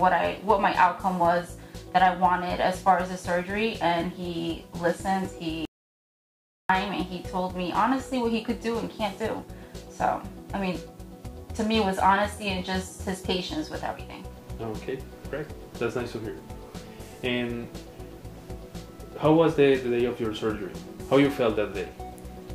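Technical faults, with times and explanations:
5.65 to 6.69 s, audio dropout to silence: the sound stops abruptly mid-flow and resumes just as abruptly about 1.04 s later, with the gap reading as silence rather than quiet room tone. Whatever occurred during that second is simply absent. The likely cause is a momentary loss of the input signal, such as a device disconnecting, a link failing or a mute being triggered, while recording continued and filled the interval with silence.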